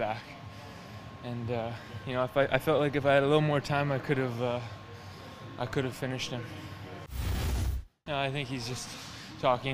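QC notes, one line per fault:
0.90–9.62 s, clock drift buffer slips: a short click recurs every 0.87 s, about ten in all. Each marks a tiny block of samples dropped or repeated. The likely cause is two unsynced clocks drifting a few hundred ppm apart, slipping roughly fifteen samples each time.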